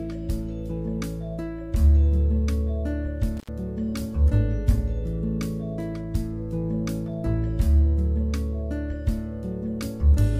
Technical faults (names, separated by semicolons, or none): intermittent contact